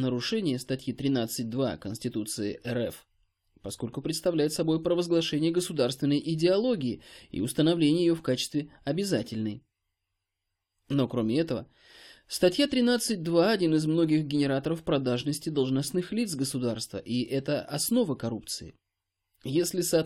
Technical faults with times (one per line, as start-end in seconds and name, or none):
none